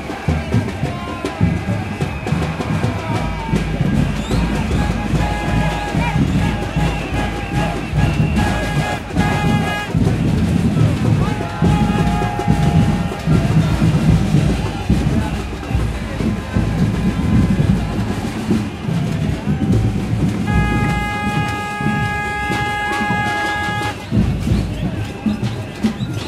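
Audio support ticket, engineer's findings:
Short blip at 6.99 s in the everyday-sound recording, lasting only a few milliseconds. Probable component: decoder input. Damaged data in a compressed stream: a corrupted stretch of bytes made the decoder misread or drop the frame there, lose sync, then recover at the next valid frame header.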